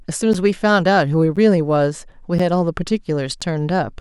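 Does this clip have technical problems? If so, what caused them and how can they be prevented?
Yes: periodic USB or driver dropouts produce short silent gaps of around 10 ms, roughly every 1.02 s from 0.33 s to 3.42 s, heard as regular ticks in the speech. A recurring background task blocks the audio path. Prevent this by disabling that task or increasing buffer size.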